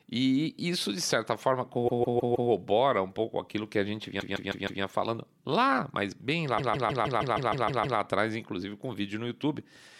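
Repeated frames stutter the speech at 1.87 to 2.50 s, 4.19 to 4.82 s and 6.57 to 7.98 s. A 157 ms block replays four, four, then nine extra times, suggesting a small run of compressed frames sent again. The clip gains about 2.7 s.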